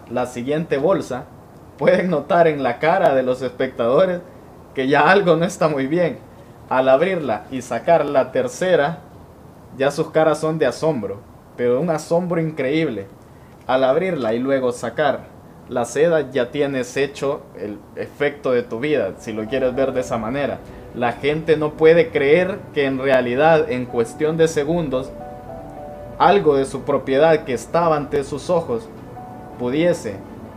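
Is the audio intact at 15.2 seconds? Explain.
Yes, at 15.2 seconds the audio plays through cleanly, with no dropout, click, distortion or other fault to be heard at that moment.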